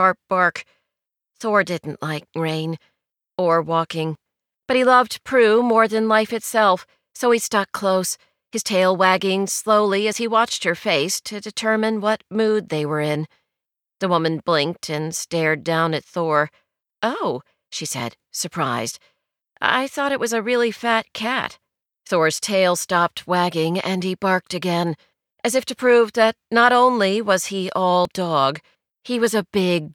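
The speech skips at 4.15, 10.13, 16.10, 22.08 and 28.05 s, each losing roughly 30 ms. The steady 6-second spacing points to audio missing between chunks, likely.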